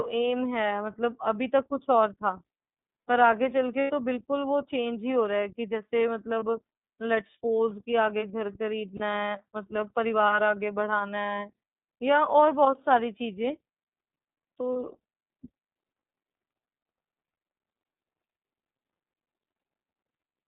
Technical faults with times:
0.00-20.48 iLBC codec
3.81-3.91 lost iLBC frames
6.39-6.43 lost iLBC frames
8.97-9.00 lost iLBC frames
14.73-14.76 lost iLBC frames

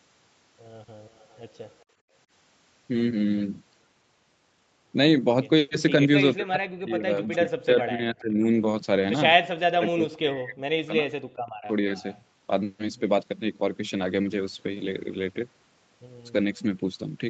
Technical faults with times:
1.08-1.85 echo leak
1.89-2.13 background gated by the echo canceller
6.37-8.44 speech suppressed in double talk
7.25-7.49 echo leak
9.75-11.15 speech suppressed in double talk
11.60-11.73 speech suppressed in double talk
11.96-12.20 echo leak

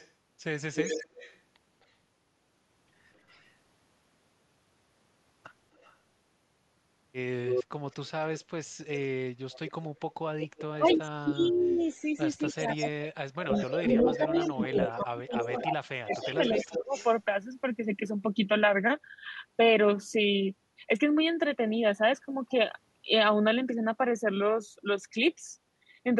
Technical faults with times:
0.00-1.38 echo leak
3.28-3.51 echo leak
5.77-5.94 echo leak
7.47-17.15 echo leak
10.72-16.93 speech suppressed in double talk

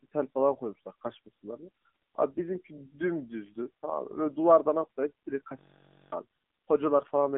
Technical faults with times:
0.00-7.37 AMR narrowband mobile codec
1.86 AMR bit errors
4.82-4.87 AMR bit errors
5.59-6.12 system hang loop
6.98-7.14 AMR bit errors

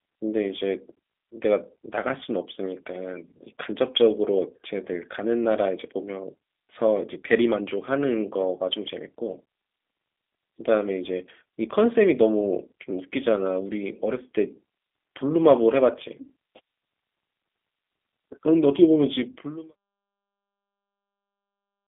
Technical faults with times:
0.00-21.87 G.729 codec

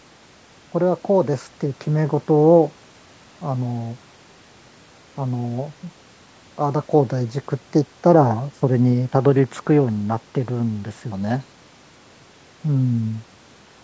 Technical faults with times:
none

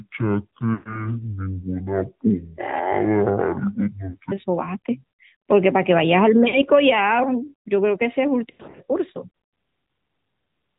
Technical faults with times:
0.00-10.78 AMR narrowband mobile codec
0.00-4.32 section at the wrong speed
0.74-1.16 lost AMR speech frames
4.10-4.17 lost AMR speech frames
6.48-6.59 lost AMR speech frames
8.50-8.81 lost AMR speech frames

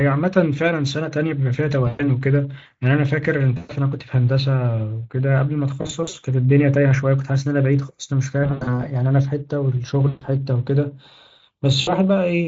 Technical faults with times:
1.87-2.04 VoIP packet loss concealed by the speech codec
3.57-3.72 VoIP packet loss concealed by the speech codec
5.81-6.15 VoIP packet loss concealed by the speech codec
8.43-8.81 VoIP packet loss concealed by the speech codec
10.07-10.24 VoIP packet loss concealed by the speech codec
11.81-11.93 VoIP packet loss concealed by the speech codec

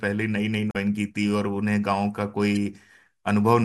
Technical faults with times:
0.69-0.76 damaged data in a compressed stream
2.55 damaged data in a compressed stream

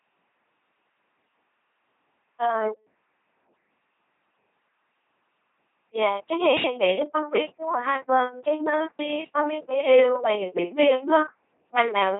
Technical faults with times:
0.00-12.19 LPC-10 vocoder

